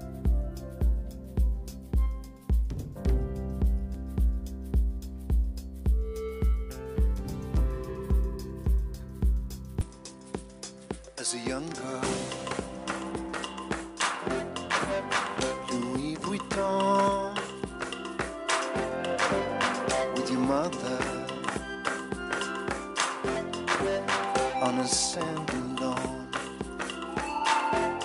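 At 9.81 s, with no gap, the sound turns duller and a few decibels quieter until the end, likely an input switched to a poorer device. On a spectrogram, content above 10.6 kHz vanishes and a faint new noise floor appears; the waveform steps down.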